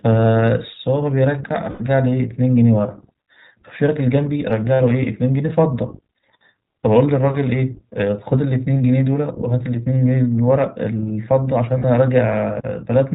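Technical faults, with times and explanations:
Throughout, iLBC codec. The speech is narrowband, with nothing above 4 kHz, so it sounds dull and boxed in. It is intelligible but has a plainly rough, slightly synthetic edge. The codec models the excitation in each short frame on its own. That loses fine detail in the voice's buzz and breath. The sound points to the 15.2 kbps mode with 20 ms frames.
1.70–1.82 s, 4.74–4.81 s, 8.74 s and 11.78–11.86 s, lost iLBC frames. Each gap is filled by a held, faintly buzzy vowel-like tone. It lasts about 100 ms at 1.70 s, about 60 ms at 4.74 and 11.78 s, and about 20 ms at 8.74 s. The decoder repeats the last pitch cycle mixed with noise. Because each frame stands alone, clean speech returns almost at once.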